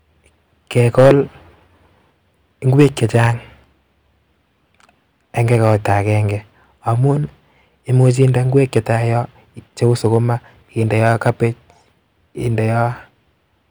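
At 2.79 to 3.26 s the speech hits hard clipping, driven about 5 dB past what the stage can pass, so its peaks are sheared flat and a harsh crackle rides the loud syllables. It returns at 8.00 to 8.95 s (about 3 dB), 9.84 to 10.17 s (about 2 dB) and 11.04 to 11.45 s (about 4 dB). On a waveform the peaks sit as flat plateaus, while a spectrogram shows broadband harmonic smear reaching high up during each burst.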